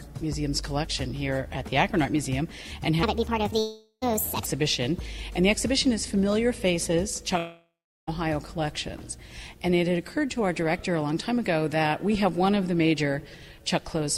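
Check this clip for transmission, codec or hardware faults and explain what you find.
Two kinds of fault turn up: a stretch played at the wrong speed and two long network dropouts.

From 3.03 to 4.46 s a section at the wrong speed plays back 1.47 times too fast, likely from being clocked at the wrong rate in an editor or player. Pitch and tempo rise together by about seven semitones, so that stretch sounds high and hurried before snapping back.

Long network dropouts occur at 3.59 to 4.04 s, inside the sped-up stretch, and at 7.38 to 8.09 s, likely from packets failing to arrive. The receiver stretches the last sound into a fading buzz for about 0.4 s and 0.7 s. The first ends in a brief silence, the second in a longer quiet gap, and then the audio resumes with those stretches missing.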